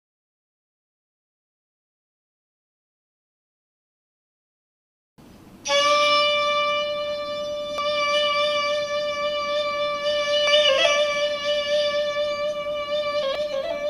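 At 5.18, 7.78, 10.47 and 13.35 s, damaged data in a compressed stream produces brief chirps or blips. Corrupted bytes make the decoder misread or reject those frames, lose sync, and hunt for the next valid frame header before resuming.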